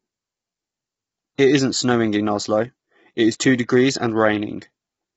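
Throughout the speech, the encoder has had too few bits to describe the signal. The heavy damage is likely from low-delay AAC compression of the AAC-ELD kind, consistent with a stream of around 16 kbps. Its short frames cannot resolve the pitch harmonics cleanly, so the voice comes across rough and grainy, with noise filling the gaps between harmonics. Nothing is present above 7.7 kHz, leaving the top band dull and thin.

From 1.35 to 1.39 s, pre-echo appears. A sharp attack landed late in a transform block, and the coding noise sized for that loud onset was spread back across the quiet stretch before it, about 34 ms in all. The result is a brief hiss that arrives just ahead of the attack, and the onset itself sounds softened and smeared rather than crisp.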